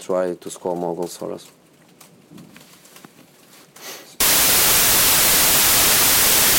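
At 4.20 s the audio turns into loud, harsh noise that continues to the end of the clip: samples built from the wrong bytes. The reader has lost track of byte order or alignment, so each sample's rapidly changing low byte lands in the high, most significant position. Unlike digital clipping or crackle, which distort a sound that is still recognisable, this replaces it outright.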